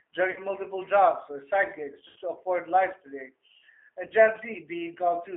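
Throughout the clip, the speech has the G.729 codec sound, consistent with G.729A at 8 kbit/s. The line band sits between roughly 300 Hz and 3.5 kHz, so everything above that is missing. The codec rebuilds each 10 ms frame from a vocal tract filter, a pitch predictor and a few pulses. The damage is plainly audible as a rough, slightly synthetic texture on the voice.

VoIP packet loss concealed by the speech codec occurs three times: 0.31 to 0.39 s, 2.08 to 2.18 s and 4.07 to 4.13 s. Their lengths suggest about 50 ms, 80 ms and 30 ms of missing audio, which fits runs of several lost 10 ms frames. In each gap, the decoder extends its last pitch and filter state with falling gain, and the speech smears into a fading buzzy tone or coloured noise. The longest gap is near 2.1 s.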